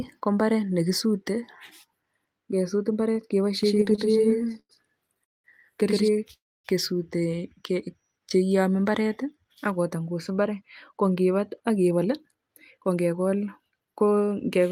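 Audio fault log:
3.63–6.08 s, doubled audio track: most likely a second capture path or misaligned edit is mixing the same speech in twice, with a full-band copy about 100 ms behind at roughly equal level, with no room colour, starting and stopping abruptly.
3.75–4.71 s and 5.07–5.46 s, repeated stalls (stutter): packets kept arriving late, so the jitter buffer emptied again and again, fifteen short waits then four longer ones up to 199 ms. The receiver stretched the last sound each time, so speech drags and stutters without losing anything.
6.33–6.66 s, call audio freeze: packets were likely held up in transit and the buffer ran dry, so the last sound was extended for about 310 ms, fading to silence for most of it, before the speech resumed where it stopped, a gap inserted rather than content lost.
9.44–13.35 s, jitter buffer speed-up: the buffer had built up excess audio, so the receiver trimmed many short pitch-period pieces, about 0.3 s in total. 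Speech runs at 108% speed at unchanged pitch and sounds hurried.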